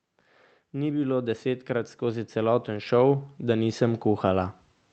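From 0.72 s to 4.57 s the speech and its background swell together by about 13 dB, the slow climb of automatic gain rising as the controller lifts a too-quiet input.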